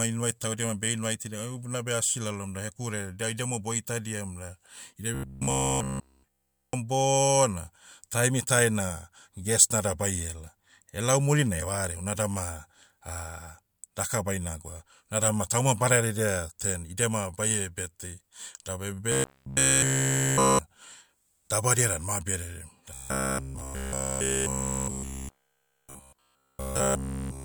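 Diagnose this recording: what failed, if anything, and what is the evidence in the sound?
Three stretches turn robotic: 5.15 to 6.73 s, 19.12 to 20.60 s, and 22.94 s to the end. A rigid 66.8 Hz buzz replaces the speech, loosely tracking it. That's robotic sound from repeated short buffers, likely a starved buffer stage looping a 15 ms chunk throughout.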